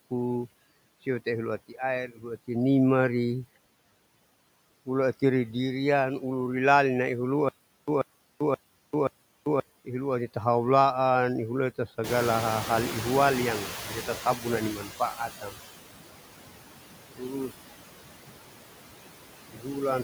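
A noise suppressor runs across the whole speech recording, pulling down the bands it judges to be steady background by about 17 dB frame by frame. These noise suppressor artifacts leave the residual noise unstable. It drops away in pauses and climbs back under the talking.

From 7.49 to 9.60 s there is a stutter with silent gaps, most likely because playback or the stream stalled and replayed its last buffered fragment on each retry. A burst of about 136 ms repeats four times, each followed by about 392 ms of dead digital silence, giving a steady 528 ms cycle. The audio that should have filled that stretch never arrives.

Around 12.0 s the room noise jumps by about 16 dB, and the suppressor's noise estimate lags behind the change. This is the noise suppressor catching up. From 12.04 to 15.55 s the louder background comes through with too little reduction, then sinks over about 3.5 s as the estimate adapts, finally settling at roughly 14 dB of cut.

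Speech cut by the noise suppressor occurs four times. Here the suppressor mistook parts of the voice for background and turned them down with it:
at 13.68–13.92 s, dropping by up to about 12 dB over a brief moment;
at 14.75–15.57 s, dropping by up to about 15 dB across close to half a second;
at 17.16–17.53 s, dropping by up to about 17 dB;
at 19.49–19.76 s, dropping by up to about 17 dB.

In each case the affected parts of the speech sound swallowed or faint.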